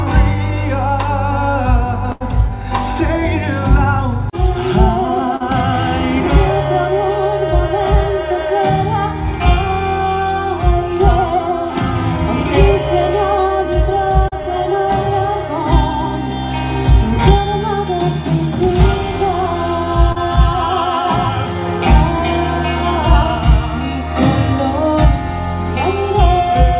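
At 2.12 to 2.23 s there is a burst of packet loss. About 80 ms of audio never arrived in time to play, so the receiver stretched the last sound it had across the hole, roughly 82 ms of invented signal fading as it went. The gap is heard as a held, dimming buzz or hiss, and the sound picks up again further along with that stretch missing.

Three shorter losses follow, each a short concealed packet loss of about 40 ms: 5.36 to 5.43 s, 14.28 to 14.35 s, and 20.12 to 20.19 s. Each time the decoder patched the gap by extrapolating from the preceding sound for about 35 to 39 ms, then blended back into the real stream. The result is a brief smear or wobble, where a short sound can drop out entirely. The call path is narrow G.711 A-law, with nothing above 4 kHz.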